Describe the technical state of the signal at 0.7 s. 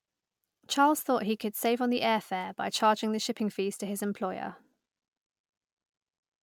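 At 0.7 s the speech carries generation loss, present for the whole clip rather than just this moment. It sounds swirly and hollow, with smeared consonant attacks, and the band stops near 19.9 kHz. That points to a fairly high bitrate, around 140 kbit/s, which a single MP3 pass would leave cleaner. The likely cause is repeated MP3 decoding and re-encoding, roughly seven times, each pass quantising on a shifted frame grid so the noise and spectral holes pile up.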